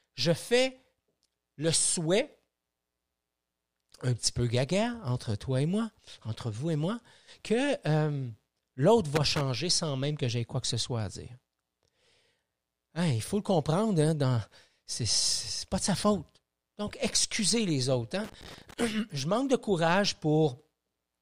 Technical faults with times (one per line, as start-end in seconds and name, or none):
9.15-9.41 loose connector crackle
18.24-18.84 loose connector crackle